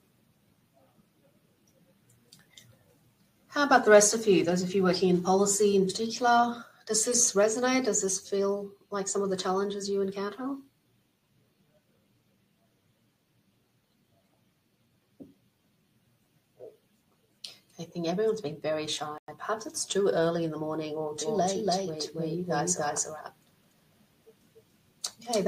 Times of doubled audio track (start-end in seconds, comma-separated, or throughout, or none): 21.21-25.47